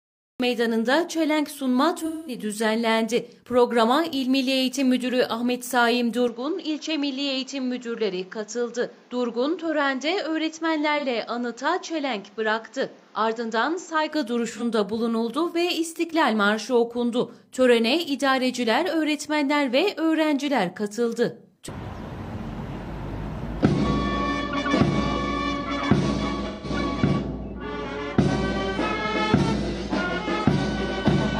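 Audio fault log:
0.00–0.40 s, cut-off start: the file opens on digital silence and then drops straight into a sound already underway at 0.40 s. There's no attack or fade-in, just an abrupt jump from nothing to full signal. That's what you get when capture or streaming kicks in late and the start of the sound never made it into the file.
1.99–2.38 s, 10.98–11.05 s, 14.55–14.63 s, 26.46–26.70 s, AAC frame loss with concealment: four dropouts where the decoder had to improvise. The longest ones, about 213 ms at 2 s and about 171 ms at 26.5 s, fit a handful of missing AAC frames at roughly 43 ms each. They come across as smeared, noisy, phasey stretches, because the decoder keeps rebuilding the last good spectrum. The two short ones, around 11.0 s and 14.6 s, each fit a single lost frame and sound like brief blurry blips.
6.28–14.11 s, input switched to a poorer device: at 6.28 s the tone turns dull and boxy with no gap at all. 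Nothing comes through above 7.6 kHz, the level falls by around 5 dB, and a new noise floor sits roughly 30 dB under the signal. At 14.11 s the fuller sound returns. The likely cause is the system swapping its input to a narrower-band mic or a headset call profile and then swapping back.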